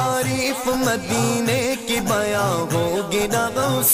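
No technical faults can be heard anywhere here.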